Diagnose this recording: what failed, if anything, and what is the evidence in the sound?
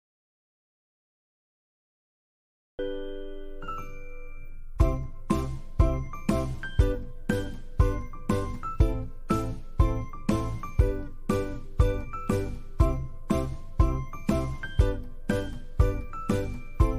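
The recording opens in dead digital silence, with no room tone at all, until the sound arrives abruptly mid-flow at 2.79 s. This is an audio dropout to silence, likely a lost input link or disconnected device ahead of the recorder, which kept writing silence.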